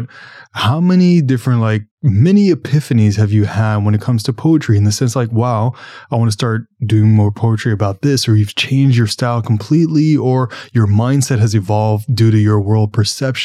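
Listening to this speech recording, nothing stood out as a technical problem at any point.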